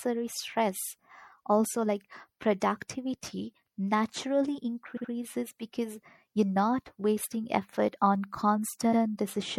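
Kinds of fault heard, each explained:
MP3 compression: The clip was likely encoded as MP3 at a low bitrate, about 64 kbps, so the encoder had too few bits and discarded the high treble and the weaker frequency detail, which drops in and out from one frame to the next. The damage is plainly audible throughout the speech as a dulled top end with a watery, swirling texture, and consonant onsets lose their crispness.
Repeated frames: A short run of compressed frames was written more than once, so the decoder plays the same slice of sound again. Between "like productivity naturally" and "because you're not wasting", a 72 ms block plays two extra times from 4.96 to 5.10 s, a stutter that adds 144 ms. Near the end, from 8.92 to 9.01 s, a 96 ms block plays once more, adding 96 ms.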